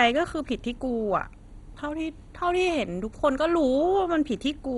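All the way through, the speech sounds dull and gurgly, with nothing above 11.2 kHz and a grainy, flickering quality as upper bands drop in and out. That's heavy MP2 compression, likely at a starved bitrate around 56 kbps.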